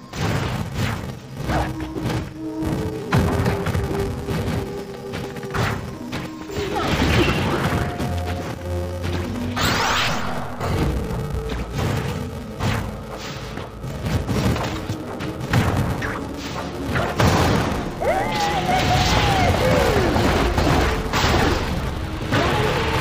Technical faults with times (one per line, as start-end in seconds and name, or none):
0.00-23.00 interleaved audio read as planar